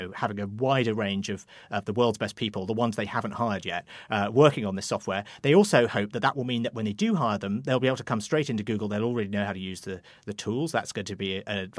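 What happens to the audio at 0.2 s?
Nothing goes wrong at 0.2 s; the speech plays through that moment intact, with no dropout, click or distortion.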